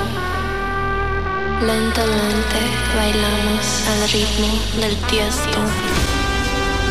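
The signal holds steady throughout, with no audible technical fault at any point.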